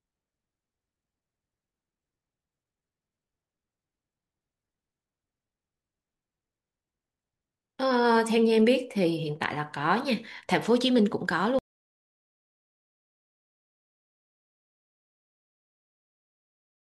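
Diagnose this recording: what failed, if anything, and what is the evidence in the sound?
The recording suffers an audio dropout to silence: at 11.59 s the speech cuts off mid-flow and silence, with no room tone, runs to the end. The recorder kept writing silence, most likely because the input device or link was lost upstream.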